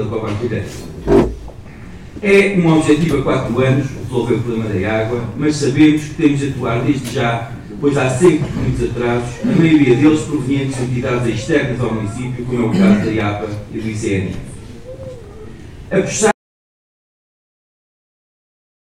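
At 16.32 s the sound cuts off abruptly and stays gone to the end of the clip, about 2.5 s of audio dropout to silence. The input was likely lost, perhaps through a disconnected device or a mute, while recording carried on writing silence. No room tone or noise floor remains. The waveform collapses to a flat line, and the spectrogram turns uniformly blank across every frequency from that instant onward.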